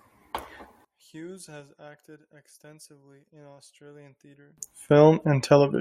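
From 0.85 s to 4.58 s the speech collapses by about 28 dB when the stereo pair is heard summed to mono, leaving only a faint residue. The likely cause is one channel inverted: with reversed polarity, everything common to both sides cancels in the sum. Unlike a plain dropout or gain fault, the sound doesn't go fully silent or simply get quieter. The centred voice and its low end disappear while faint difference content lingers.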